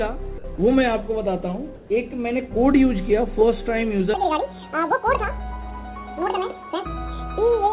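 At 0.38 to 0.44 s and again at 0.56 to 0.58 s, the sender's voice detector likely mistook real sound for background and stopped sending, so the sound briefly drops out and is replaced by flat comfort noise. From 1.76 to 1.9 s, transmission likely paused during a gap, and the receiver filled it with comfort noise in place of the background: a smooth, featureless hiss about 1 dB quieter than the real background it covers. From 4.14 s to the end, that section was likely played at the wrong speed, about 1.89 times too fast, so everything sounds hurried and roughly ten semitones higher. Throughout, nothing is heard above 4 kHz, as expected from a narrowband call codec.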